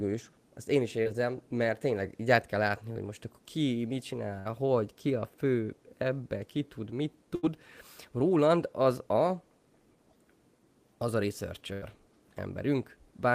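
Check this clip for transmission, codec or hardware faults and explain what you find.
Two kinds of transmission fault appear, both from packets arriving too late or not at all.

Short concealed packet loss occurs at 1.03 s and 2.93 s. About 20 ms of audio never reached the decoder, and the receiver patched the hole by extending the preceding sound before blending back. The result is a brief smear or wobble rather than a gap.

A burst of packet loss occurs at 4.39 s, 7.35 s and 11.73 s, with roughly 60, 80 and 80 ms missing. The receiver kept extending the last sound while fading it, giving a held buzz or fading hiss. The audio then resumes further on.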